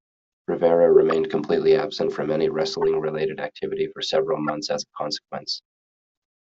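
Corrupt frames decoded at 1.11 s, 2.82 to 2.84 s and 4.48 to 4.50 s: damaged compressed frames were played anyway, spraying energy into wrong frequencies for a few frames each. They sound like brief chirps and squeaks, loudest at 1.11 s, not the silent gap of a dropout.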